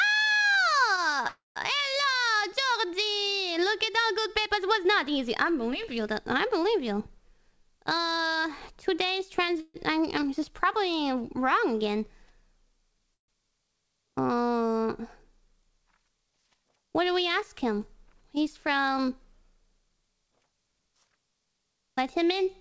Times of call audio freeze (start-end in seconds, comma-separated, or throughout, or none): 1.27-1.58, 9.60-9.76, 13.14-13.30